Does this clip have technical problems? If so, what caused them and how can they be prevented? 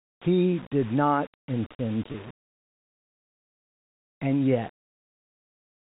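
Yes. Low bit depth without dither runs throughout: a grainy distortion tracks the speech, roughly 25 dB below it, roughening quiet passages, likely from rounding to about 6 bits without dither. Keep 16 bits or more, and add dither whenever bit depth must be reduced.

Packet loss with pitch repetition occurs at 2.12 to 2.14 s, right after "did not intend": a 20 ms gap, fitting one lost packet, is bridged by repeating the last pitch period, giving a brief buzzy hold. Use a steadier network path or forward error correction to keep packets from being lost.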